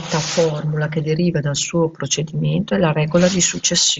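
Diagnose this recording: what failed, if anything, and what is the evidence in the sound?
Nothing in this speech recording points to a failure at any stage. The Bluetooth mSBC headset codec is working as designed: the speech reaches up to about 8 kHz, with a light grain on the louder moments and the faintest upper detail coming and going.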